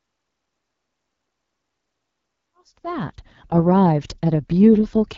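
From start to finish the speech sounds rough and raspy, with a buzzy, grainy edge on voiced sounds and a hissy, slightly artificial top end. This is the AMR wideband (HD Voice) codec running at one of its lowest rates, which fits the 8.85 kbit/s mode. The coder models speech below 6.4 kHz with a pulse-excited vocal tract filter and fills 6.4 to 7 kHz with shaped noise, and at this rate the model is too coarse. The level also rises in a smooth fade-in from about 2.5 s to 3.55 s.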